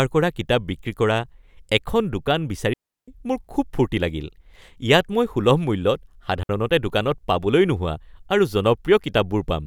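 A digital wireless dropout occurs twice: the receiver loses too much of the radio data and mutes with a very short fade. From 2.73 to 3.08 s the speech falls into a clean hole of near silence lasting about 345 ms, and again for about 63 ms from 6.43 to 6.49 s, with no noise burst around either gap.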